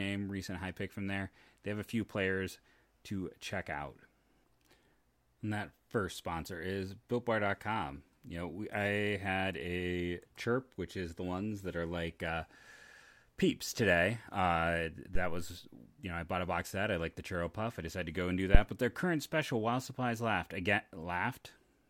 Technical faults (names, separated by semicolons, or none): phantom power thump